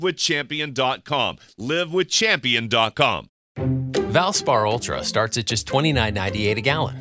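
Nothing in this audio stands out as a technical fault; it just runs along without any trouble worth pointing to.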